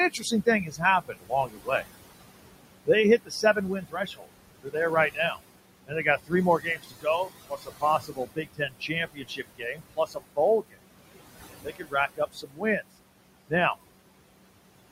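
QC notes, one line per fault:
Throughout: noise suppressor artifacts. Room noise sitting about 11 dB under the speech is pulled down about 21 dB between phrases and lets through under them, so the background pumps. A spectrogram shows a noise floor that blinks between dark gaps and speckled patches.
0.10–1.69 s, 2.86–4.29 s, 4.62–4.76 s, 5.13–5.40 s, 5.87–10.79 s, 11.63–12.83 s: speech cut by the noise suppressor. Soft consonants and word tails are taken for noise and dropped by up to about 15–21 dB, roughly four seconds in total, so they sound swallowed. The waveform shows clipped-short envelope tails, and the spectrogram shows faded high-frequency consonant energy.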